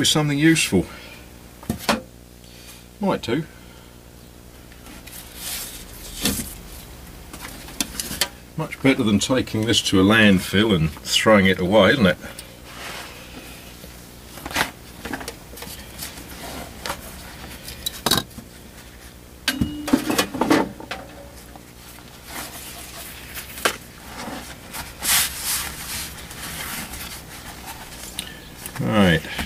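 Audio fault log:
throughout, video or display buzz: a screen or video cable couples into the audio, giving a rasping 59.94 Hz field-rate buzz with hash above it and a thin 15.7 kHz line-rate whistle, roughly 20 dB below the sound. The whistle and hash separate it from smoother mains hum.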